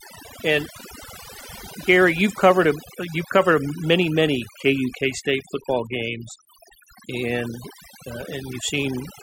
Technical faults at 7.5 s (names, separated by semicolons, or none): overdone noise removal